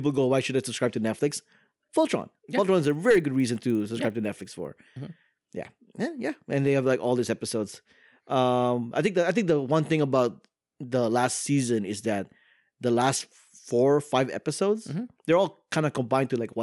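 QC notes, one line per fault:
2.8–4.7 s, resampler restarted on every block: each 50 ms block was converted from 24 kHz to 48 kHz on its own, leaving a small error at every edge. This is heard as a 20 Hz tick train under the speech. On a spectrogram, faint vertical broadband lines appear every 50 ms; the waveform shows small steps at block boundaries.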